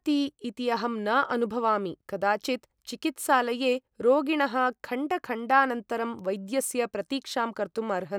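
A short speech recording, with nothing technically wrong anywhere in it. No fault can be heard at any point, so there are no times or causes to report.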